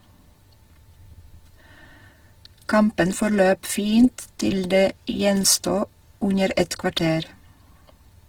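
From start to finish, the speech carries plainly audible coding damage. It sounds rough and grainy rather than swirly, and the voice takes on a noisy texture. The band stays wide, with content reaching about 20.4 kHz. That points to Opus compression in its music mode, likely at a low bitrate near 16 kbps. Short of bits, the encoder keeps each band's energy but fills the detail with noise or folded copies of lower bands. That creates the grain.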